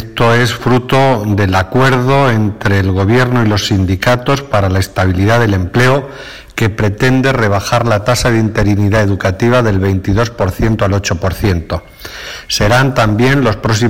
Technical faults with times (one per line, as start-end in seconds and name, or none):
0.00-13.89 hard clipping